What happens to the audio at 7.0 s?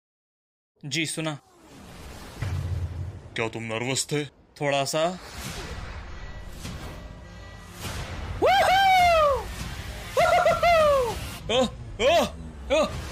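Nothing goes wrong at 7.0 s; the audio plays through that moment intact, with no dropout, click or other fault.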